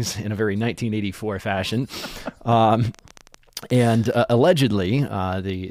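From 2.95 to 4.50 s, a train of clicks ticks over the speech: around twenty sharp, similar pops, irregularly spaced at roughly 11.7 per second and about as loud as the voice. The likely cause is interference from nearby equipment or a faulty connection or power supply.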